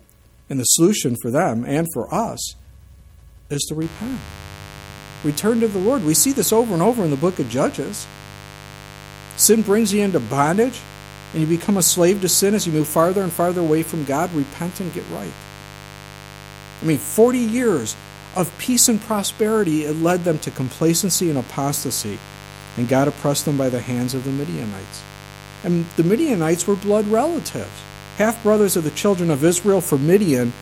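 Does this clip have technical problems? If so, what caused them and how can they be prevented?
Yes. A mains buzz starts at 3.82 s and runs to the end of the clip at 30.61 s, sitting roughly 20 dB below the programme level. It is a steady, raspy tone built on 50 Hz. Sharp switching spikes from a dimmer, rectifier or unshielded cable couple into the signal path twice per mains cycle, and those narrow pulses spread harmonics well up into the kilohertz range. Prevent it by keeping audio cabling shielded and away from dimmers and power supplies.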